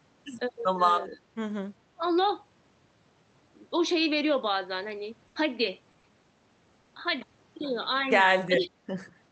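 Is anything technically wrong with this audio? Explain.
Yes. The speech has three kinds of fault: level dips, a held, fading sound with a skip, and brief smears. The call codec's top end stops around 8 kHz.

Speech suppressed in double talk: The level dips briefly at 1.16–1.20 s and 1.97–2.02 s, each time by about 10 dB for a few hundredths of a second. At 8.51–8.79 s it drops much harder, by about 20 dB, for roughly a third of a second. The likely cause is an echo canceller that heard both sides at once. It could not tell this talker from its own loudspeaker echo and turned the near side down.

Burst of packet loss: At 5.27–5.37 s the sound freezes into a held, fading continuation for about 80 ms. It then jumps ahead, and about 80 ms of audio is simply gone. Several consecutive packets arrived too late or not at all. The receiver stretched the last sound it had and lowered it as the gap lengthened, then resumed at the current position rather than where it stopped.

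Short concealed packet loss: Brief smears or wobbles occur at 5.91–5.95 s (20 ms), 5.99–6.05 s (40 ms) and 6.81–6.87 s (40 ms). In each, a short stretch of audio missed the decoder's deadline. The receiver synthesised a stand-in from the preceding sound and blended it back into the real signal. That leaves a momentary blur where the genuine audio should be, with the original content of those few hundredths of a second lost.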